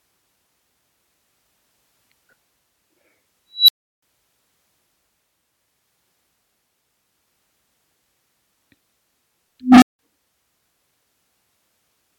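At 3.51 s and 9.60 s, an unstable filter's output runs away: a tone around 4 kHz, then one around 300 Hz, swells to clipping, overflows, and drops into brief silence.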